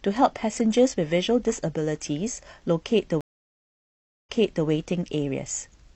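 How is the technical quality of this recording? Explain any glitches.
One glitch affects the speech. At 3.21 to 4.67 s there is a stream reconnect: a 1.04 s silence, then a fresh decoder resumes 0.42 s earlier, repeating audio, unlike a plain dropout.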